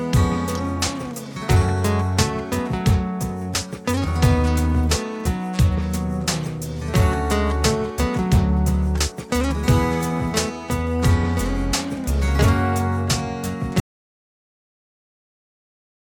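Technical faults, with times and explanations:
13.8 s to the end: audio dropout to silence. The sound cuts off abruptly and the last 2.2 s are silent, with no room tone or noise floor, likely because the input was lost through a disconnected device, failed link or mute while recording continued writing silence.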